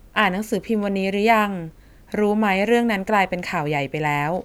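Nothing in this short bit of speech stands out as a technical fault, so there's nothing here to track down.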